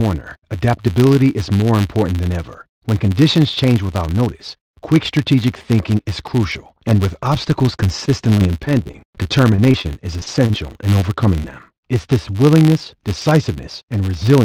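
A filter restarted on every block runs through the whole clip. Its state is cleared each block, so every block starts with a small transient. These merge into a 100 Hz buzz that rises and falls with the speech level. That rate fits 10 ms blocks.

From 8.05 to 10.56 s, just after "crucial and with obstacles", there is repeated packet loss with a robotic sound. There are roughly sixteen short holes, the longest 36 ms. Each is patched by stretching the previous sound. About 13% of the span is concealed, so the speech turns choppy and robotic.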